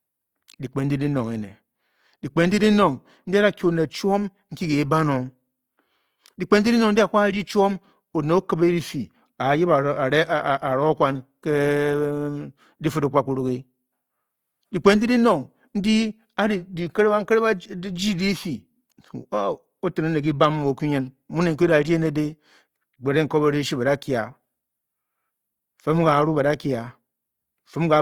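From start to finish the speech sounds grainy and rough, with a noisy, sandpapery edge on voiced sounds. That's likely Opus compression in its music mode, which fits a low bitrate around 24 kbps: the band energies survive but detail gets filled with noise, even though the top still reaches about 20.3 kHz.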